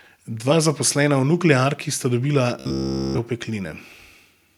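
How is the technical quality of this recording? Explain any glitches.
The recording has one clear glitch, in the speech from 2.60 to 3.18 s: robotic sound from repeated short buffers. Across that whole stretch the voice turns into a rigid, metallic buzz around 66.7 Hz that only loosely tracks the words. That pitch points to a 15 ms chunk looping, most likely because fresh audio wasn't arriving in time and the software kept replaying the last buffer.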